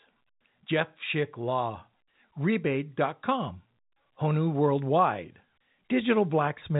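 Nothing goes wrong anywhere in this bit of speech, which simply carries the narrow, telephone-band character of ordinary G.711 coding with nothing coming through above about 4 kHz.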